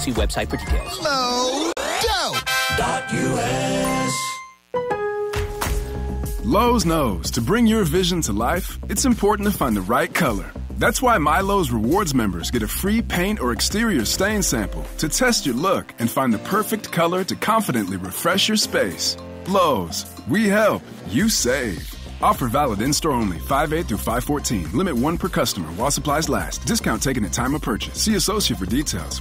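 From the start until 20.46 s a mains buzz runs under the sound, sitting roughly 35 dB below it. Sharp switching spikes from something like a dimmer or rectifier are getting into the signal twice per 60 Hz cycle, and they carry harmonics far up into the kilohertz range. That spread of harmonics is what separates it from a plain hum. Instead of a smooth, low tone, it has a raspy, edgy quality, and it stays steady until it stops at 20.46 s.

At 1.73 s, inside that buzz, the audio cuts out for about 44 ms and comes back at 1.77 s. This is a gap at a join of encoded pieces. The material was encoded in separate sections and then joined without trimming, so the encoder's start-up delay and the padding in the last frame were both left in as silence. This is not a dropout where audio is lost. After the gap, the sound continues from exactly where it stopped, and both edges are smeared by the codec.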